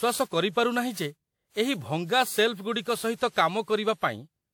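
From start to end, the speech has a swirly, hollow, smeared quality, with blurred consonant attacks and nothing above 19.3 kHz. This is likely generation loss: repeated lossy re-encoding, about seven passes, consistent with a WMA-type codec near 96 kbit/s, each compounding quantisation noise.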